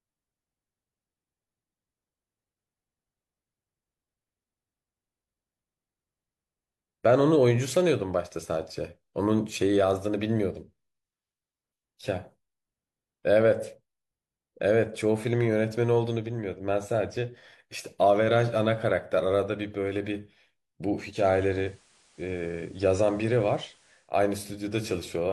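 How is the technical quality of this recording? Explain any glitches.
One fault is audible. From 21.03 to 24.13 s, digital radio blending to analogue: the receiver cross-fades over about 0.23 s to FM, bringing in faint hiss, with no level jump.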